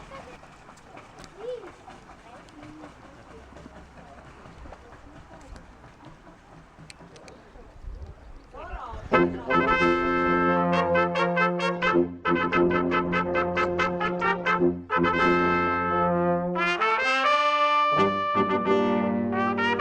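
From 11.76 to 16.89 s the audio turns rough and watery and loses its top end above 8 kHz, worst for about 2.8 s. This is a call bitrate drop: the encoder was forced into coarse coding, pointing to a fall from 64 to roughly 10 kbps.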